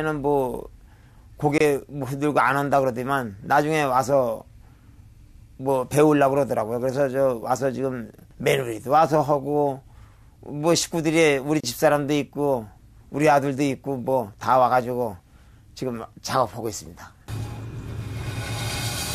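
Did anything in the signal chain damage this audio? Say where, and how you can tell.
Yes, there's a gap at a join of encoded pieces, twice: about 24 ms of silence from 1.58 to 1.60 s, and about 31 ms from 11.60 to 11.64 s, exactly 10 s apart. It's a codec-stage problem. The audio was encoded in separate chunks and concatenated without trimming, so each seam keeps the encoder's start-up delay and last-frame padding. You hear a dropout with its edges smeared by the codec, and then the sound carries on from where it stopped.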